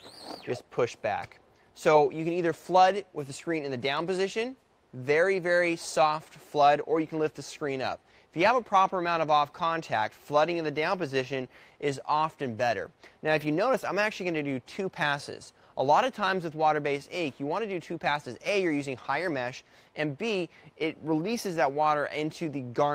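No technical faults are audible anywhere in this audio.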